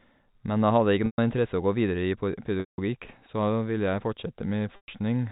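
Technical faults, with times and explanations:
1.06–1.18 s, 2.60–2.78 s and 4.76–4.88 s: packet loss with pitch repetition. Three gaps of 120 ms, 180 ms and 120 ms, which fits runs of 20 ms packets going missing. Each time the receiver replays the last pitch period, so the sound briefly holds with a buzzy, frozen quality. That repeat fades out over about 50 ms into silence, and the speech then returns through a short cross-fade. The longest dropout is at 2.60 s, heard through the narrow 4 kHz telephone band of the G.711 line.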